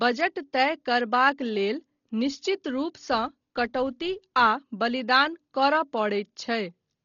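Dolby Digital compression, likely, runs throughout: a starved encoder, pointing to roughly 32 kbps, cuts everything above 6.9 kHz and fills bare lines with fluttering noise. From 3.09 to 4.46 s, just after "तय करबाक लेल निश्चित", a filter restarted on every block clicks from silence each block, giving a 172 Hz buzz that fits 256-sample blocks.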